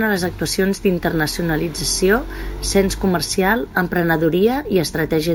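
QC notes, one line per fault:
Throughout: imaging from sample-and-hold upsampling. Unfiltered sample repetition, which points to a 16 kHz source raised to 48 kHz, leaves mirrored speech energy at 8–16 kHz, about 16 dB down, heard as metallic fizz.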